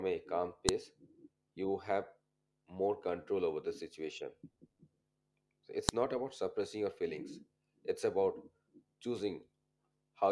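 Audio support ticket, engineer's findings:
Sharp snaps at 0.69 s (after "a calm") and 5.89 s (before "not about suppressing your"). File header played as audio: WAV segment headers left in at the joins, decoded as samples.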